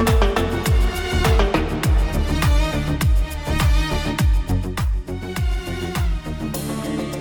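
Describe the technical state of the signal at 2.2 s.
At 2.2 s the signal is intact, with no dropout, clipping, glitch or other technical fault at that point.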